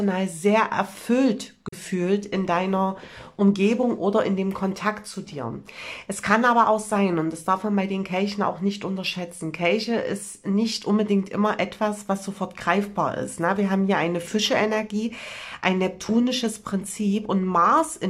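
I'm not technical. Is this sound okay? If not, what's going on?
No. At about 1.68 to 1.74 seconds the sound softly fades out and back in. This is AAC frame loss with muting: a short chunk of about 43 ms went missing and was replaced by silence.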